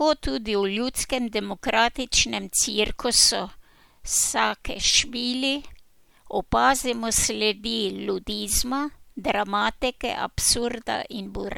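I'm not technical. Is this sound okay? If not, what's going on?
Yes, this recording sounds fine, with nothing going wrong that you would notice while listening. The speech comes through steadily, without any interruptions, glitches or sudden changes in the sound.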